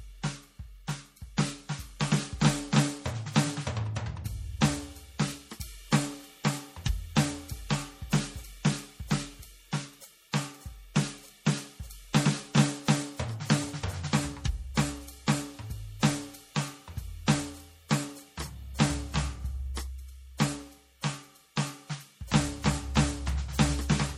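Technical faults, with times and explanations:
Throughout, MP3 compression: an encoder starved of bits, which fits a low rate near 48 kbps, likely cut everything above 17.3 kHz and zeroed weak frequency lines frame by frame, so the music sounds plainly watery and swirly with smeared attacks.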